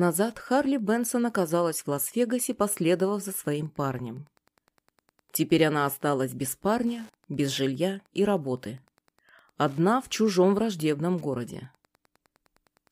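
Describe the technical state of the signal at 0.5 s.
At 0.5 s the signal carries Wi-Fi interference, which runs through the whole clip rather than starting or stopping near this point. A nearby Wi-Fi radio's beacon transmissions are being picked up and rectified by the audio circuitry, so each beacon, repeating every 102.4 ms, lands in the audio as a short click. The result is a steady ticking at roughly ten per second, sitting around 40 dB below the programme sound.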